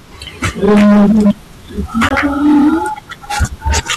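Hard clipping runs through the whole speech clip: the level is pushed about 15 dB beyond what the signal chain can pass, so around a tenth of the waveform has its peaks sheared flat. Those flat tops add high harmonics, heard as a harsh fuzz on every loud syllable.

A Bluetooth dropout follows from 2.09 to 2.11 s, a hole of about 20 ms, which fits a single lost packet. The sound cuts to silence and then resumes further along, as if it had kept playing. The likely cause is a packet missing its delivery deadline to the headphones.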